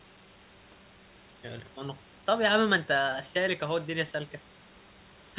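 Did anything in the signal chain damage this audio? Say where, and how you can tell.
No, nothing in the chain damaged this speech; the call path's phone-grade codec leaves nothing above 4 kHz, which is just how that codec is built, and the room's background noise sits about 31 dB below the voice, a property of the recording space rather than of any equipment.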